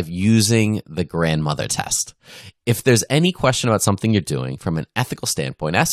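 Corrupt frame decoded, from 3.24 to 3.26 s, just before "question about something you're": damaged bits in a couple of compressed frames were decoded anyway, so misread gains pushed energy into wrong frequencies, producing a short burst of wrong sound peaking around -10 dBFS.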